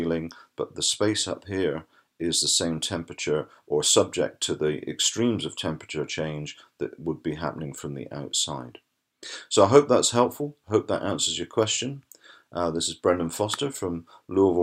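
Nothing here calls for a fix: the audio runs without any technical fault worth flagging.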